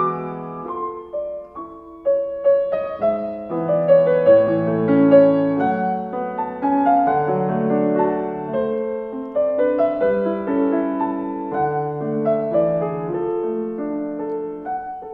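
Nothing in the audio stands out as a technical problem; it runs steady and intact the whole way, with no dropouts, glitches or damage to point at.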